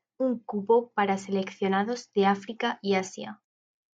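No technical faults turn up in the speech at any point, so there is nothing to place in time order.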